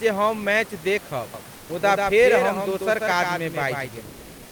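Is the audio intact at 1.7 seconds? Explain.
No. At 1.7 seconds you're inside a doubled audio track that runs from 1.34 to 4.08 s. A second full-band copy of the speech sits roughly 150 ms behind the original at around 5 dB quieter, so everything gets a dry, slapback-style echo with no room tail. It starts and stops abruptly at the span edges. The likely cause is the same signal being captured again through a slower path, or an edit leaving two copies out of step.

Right up to 1.69 s, just before that moment, there's also comfort noise in place of the background. For about 120 ms starting at 1.57 s, the real room noise, which sits about 25 dB below the loud parts, gets swapped for steady, featureless synthetic hiss that is about 1 dB quieter. The likely cause is discontinuous transmission, which fits Opus DTX: the sender stops transmitting during a pause, and the receiver fills the gap with roughly shaped noise.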